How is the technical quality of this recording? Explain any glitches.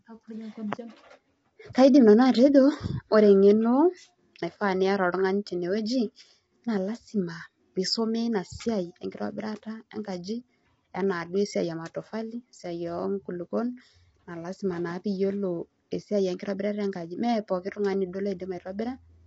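The speech has audible coding damage from start to finish.

Throughout, voices sound rough and grainy with nothing above 7.8 kHz. This is likely low-delay AAC compression, whose coarse quantization at about 24 kbps leaves noise between the harmonics.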